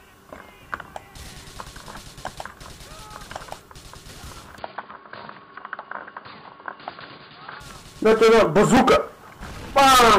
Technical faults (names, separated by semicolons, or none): input switched to a poorer device